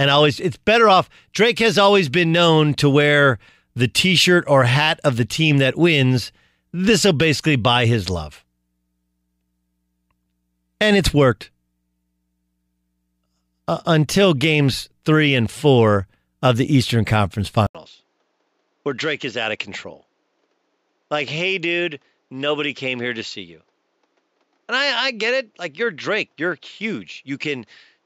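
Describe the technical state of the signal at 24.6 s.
At 24.6 s the input has likely switched to a poorer device, from 17.67 s onward: narrower and duller, nothing above 7.6 kHz, about 5 dB quieter, with faint new noise. The 80 ms silence at the switch sets it apart from simple filtering.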